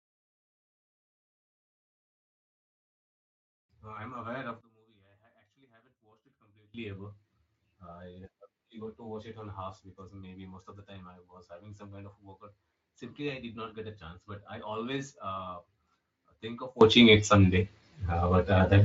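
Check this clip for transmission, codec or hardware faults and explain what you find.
Two faults stand out, both sudden gain jumps, heard through the light, slightly grainy texture of Speex coding.

At 4.61 s, right after "I'm aware of", the level drops by about 24 dB in a single step, speech and background noise together, and stays down until 6.74 s, where it snaps back. The likely cause is a digital gain change applied from one sample to the next, with no fade to smooth the transition.

At 16.81 s, after "think of", the opposite happens: the level leaps up by about 21 dB and stays there to the end of the clip at 18.84 s. The background noise rises along with the speech, which points to a gain change in the signal path rather than anyone speaking louder.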